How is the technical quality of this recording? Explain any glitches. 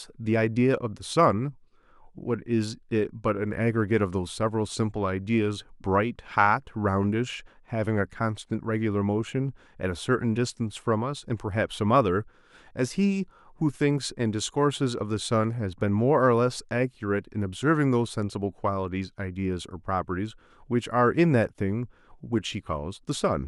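On listening, nothing in the recording stood out as a technical problem.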